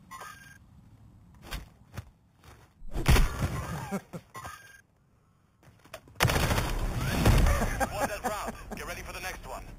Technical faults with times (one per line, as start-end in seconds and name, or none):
0.00-9.78 imaging from sample-and-hold upsampling